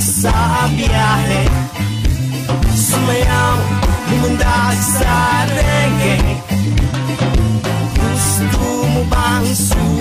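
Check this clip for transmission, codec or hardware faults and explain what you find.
Hard clipping runs through the whole clip. Peaks exceed a stage's range by about 7 dB, so roughly 7 percent of samples are cut flat, adding harsh high harmonics and crackle on loud moments.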